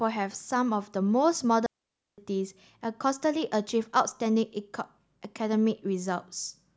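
At 1.66 s the speech cuts to a clean hole of near silence lasting about 0.52 s, ending at 2.18 s, with no noise burst on either side. This is a digital wireless dropout: the receiver lost too much data and muted with a very brief fade.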